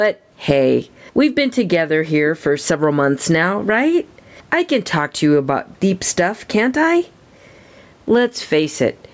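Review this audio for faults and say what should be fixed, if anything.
Gain pumping runs throughout the clip, with a swing of around 10 dB, most likely from input gain set far too high and a fast limiter clamping down on each peak. Lowering the microphone gain so the limiter rarely engages would prevent it.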